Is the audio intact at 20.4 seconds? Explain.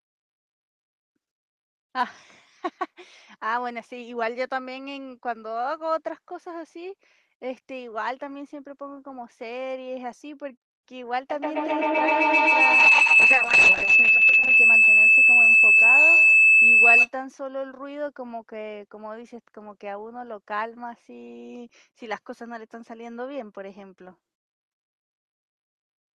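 Yes, at 20.4 s the speech is intact, with no dropout, click or distortion; only the ordinary coding of the call path is present.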